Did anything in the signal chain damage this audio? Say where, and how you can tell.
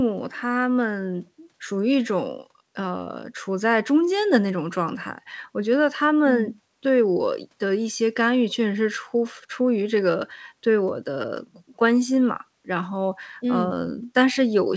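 No, nothing in the chain damaged this speech; it came through a WebRTC call path with the G.722 codec at 64 kbps, so nothing above 8 kHz is expected.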